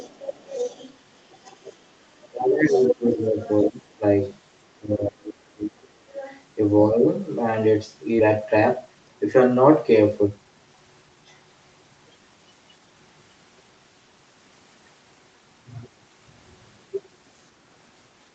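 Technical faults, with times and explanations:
0.00–0.96 s, 1.31–1.74 s, 2.23–2.28 s, 2.67–3.62 s and 6.22–6.41 s, other side's voice leaking through: A second voice sits under the main talker. It is about 15 dB down at the start, about 25 dB down at 1.31 s and 6.22 s, about 35 dB down at 2.23 s, and only about 5 dB below the talker at 2.67 s. This is likely loudspeaker echo the canceller missed. Unlike noise, it is a distinct voice that comes and goes in separate stretches.
2.30–4.03 s, 4.71–6.25 s and 6.89–6.98 s, speech suppressed in double talk: The main talker's level sinks while the other voice is active. It falls by as much as about 20 dB in the first stretch and about 30 dB in the second, totalling about a second and a second and a half. The dip at 6.89 s is brief and shallow, about 5 dB. The likely cause is the echo canceller ducking both voices when both are active at once. Unlike a dropout, the sound is turned down rather than missing.
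8.19–8.30 s, skip ahead: Playback jumps forward with no audible gap. About a second of audio is missing, and the two sides are joined almost directly. The delay shrinks by the same amount, which points to the jitter buffer discarding a backlog. Unlike packet loss concealment, there is no filled-in or smeared sound, only an abrupt join.
8.86–9.16 s and 10.23–11.26 s, jitter buffer speed-up: The speech runs faster at an unchanged pitch, at about 115% and then 118%. Short pitch-period pieces are cut out repeatedly, removing roughly 50 ms and 200 ms, to reduce excess buffered delay. Unlike a skip, nothing is lost in one piece. The talker simply sounds hurried, and pitch is unaffected, unlike a resampling error.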